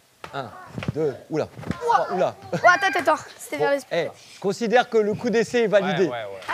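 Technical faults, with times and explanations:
Nothing technical goes wrong anywhere in this audio, so there's nothing here to flag.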